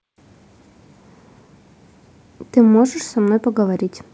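No technical faults are audible.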